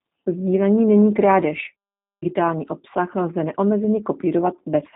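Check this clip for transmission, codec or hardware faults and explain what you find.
One codec fault runs through the whole clip: the speech has been through the G.729 codec. From start to finish the speech is rebuilt from a vocal-tract filter, a pitch predictor and a few pulses per 10 ms frame, which fits an 8 kbit/s G.729A stream. The damage is plainly audible as a rough, slightly synthetic texture. Nothing passes above 3.8 kHz, so a spectrogram shows a hard ceiling there with empty space above.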